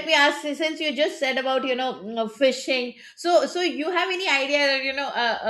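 No technical faults can be heard anywhere in this recording of speech. Nothing interrupts, distorts or drops out of the audio at any point.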